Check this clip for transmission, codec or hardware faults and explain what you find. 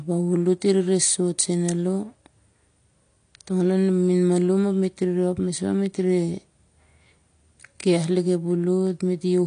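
One codec fault runs through the whole speech clip: dull, smeared sound with nothing above 9.8 kHz and a warbly, fizzy texture, likely AAC compression starved of bits, consistent with AAC-LC at about 32 kbps.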